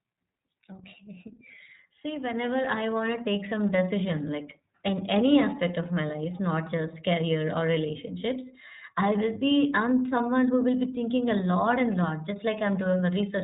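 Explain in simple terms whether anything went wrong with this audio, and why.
iLBC codec damage throughout the whole clip: the speech was squeezed by a phone-call codec that drops everything above 3.8 kHz, leaving it muffled and slightly rough.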